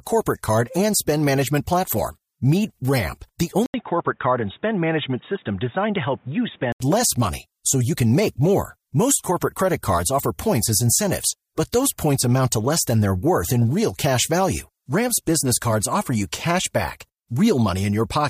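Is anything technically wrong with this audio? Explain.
Yes. From 3.66 to 6.80 s, just ahead of "less money so you", the audio goes dull and boxy, with nothing above 3.8 kHz, a brief 80 ms gap and a faint new noise floor. This is likely an input switched to a poorer device.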